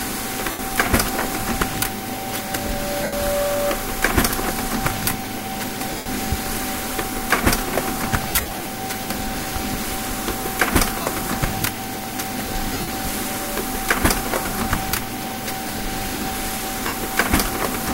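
Lost LE Audio frames occur at 0.51–0.59, 3.03–3.13, 5.97–6.06, 8.28–8.66, 11.01–11.06, 12.73–12.90 and 16.87–16.93 s. Each gap, 45 to 247.5 ms long, fits runs of 7.5 ms frames. The LC3 decoder fills them by repeating the last spectrum with random signs, so tonal sound smears into noise. The 8.28 s and 12.73 s stretches are scattered dropouts, with runs of about 50 ms and about 70 ms.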